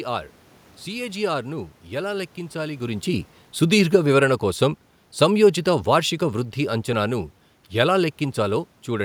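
Automatic gain falling from 3.07 to 8.69 s: the gain control lowered its gain, so speech and room noise sink together by about 7 dB.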